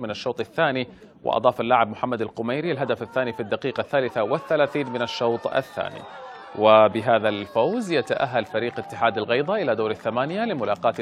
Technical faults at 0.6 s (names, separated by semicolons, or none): none